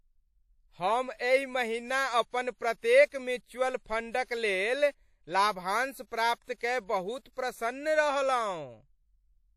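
Throughout, the speech has likely been through WMA compression at a bitrate that fits 48 kbps, cutting everything above 16.5 kHz and leaving plainly audible ringing, washy smearing.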